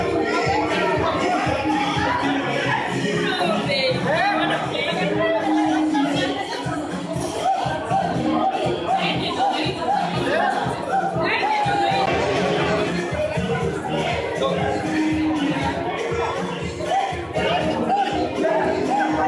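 No technical faults can be heard anywhere in this audio.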